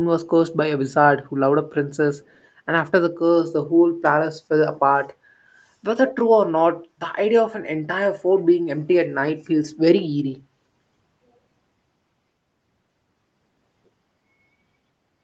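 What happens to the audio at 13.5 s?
Nothing goes wrong at 13.5 s; the speech there carries on intact, with no dropout, glitch or distortion.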